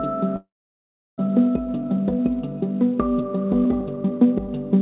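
From 0.36 to 1.28 s the sound gives way to a fading buzz and then silence before resuming further on, the likely result of a long network dropout. Two jitter buffer speed-up passes follow: the audio runs hurried at unchanged pitch, about 109% speed from 1.75 to 2.29 s and 111% from 3.20 to 4.48 s, as the receiver trims short pitch-period pieces to shrink a swollen buffer.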